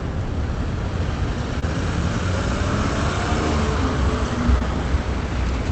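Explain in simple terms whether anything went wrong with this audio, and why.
Yes, two short hiccups are audible, both caused by short concealed packet loss. Around 1.59 to 1.68 s, and again around 4.59 to 4.62 s, about 20 ms of the call audio arrived too late to play. The receiver covered each hole by stretching the sound just before it, so you hear a brief smear or wobble rather than silence. A plain dropout would leave a gap instead. The audio passed through a call link that trims the highest frequencies, above 8 kHz.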